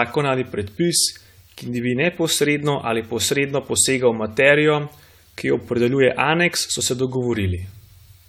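Generation loss runs through the whole clip: the speech has a swirly, smeared, hollow quality that is worse than a single lossy encode would leave, and consonant attacks sound blurred. The likely cause is repeated decoding and re-encoding, around seven passes, each quantising again on a shifted frame grid so the noise and spectral gaps pile up. The character fits an AAC-LC chain near 96 kbit/s, and nothing remains above 20 kHz.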